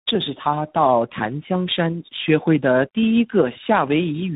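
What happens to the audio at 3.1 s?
At 3.1 s the speech carries tandem speech coding, as it does through the whole clip. The sound fits a G.729A link followed by a G.726 stage, with a G.711 hop between them. Each coder re-encodes the previous one's artefacts, so the errors stack. The result is rougher, more muffled and more warbly than a single codec would give, with nothing above 3.8 kHz.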